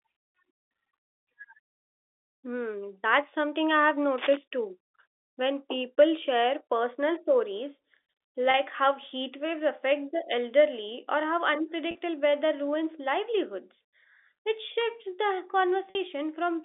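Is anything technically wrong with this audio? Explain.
Yes, there are two kinds of fault over what is clearly telephone-band speech carried by G.711, with its narrow band of about 300 Hz to 3.6 kHz.

From 4.18 to 4.37 s, right after "that's something I have", there is cable scratch noise: a dense, uneven rustle only about 5 dB below the speech. It is likely a worn cable or connector being moved, with its contact resistance jumping about. Unlike a single click or a dropout, it is a ragged burst of noise riding over the speech.

Packet loss with pitch repetition occurs at 8.51 s (30 ms, just before "how heat waves affect"), at 11.91 s (40 ms), and at 15.91 s (50 ms, after "livelihoods it shifts the"). Each gap fits roughly 10 ms packets going missing. The receiver fills the gap by repeating the last pitch period, so the shorter spots sound like a brief, buzzy held tone, while the 50 ms one fades toward silence before the speech returns with a short cross-fade. 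That tonal quality sets it apart from the noisy scratch.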